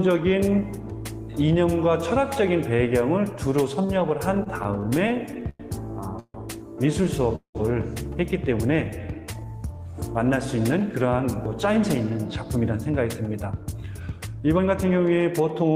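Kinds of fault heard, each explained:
repeated stalls (stutter): From 4.43 to 5.63 s the audio halts thirteen times, the longest wait about 101 ms. Each gap is filled by stretching the last sound, so about a fifth of that stretch is patched. Nothing goes missing, but the flow drags and stutters.
call audio freeze: At 6.20 s and again at 7.36 s the sound hangs, then decays into silence. The held sound lasts about 146 ms, then about 194 ms, with 50 ms and 110 ms of quiet. Delayed packets likely emptied the jitter buffer. The audio resumes where it stopped.
jitter buffer slow-down: From 8.76 to 9.92 s the audio runs at about 87% speed while its pitch stays put. The receiver repeated tiny pitch-length slices to rebuild its reserve, adding about 160 ms. Sounds come out drawn out.
jitter buffer speed-up: From 11.76 s to the end the audio runs at about 110% speed, pitch unchanged. The receiver kept trimming short pitch-length pieces to shed surplus delay, removing roughly 0.4 s in total. 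The result sounds rushed.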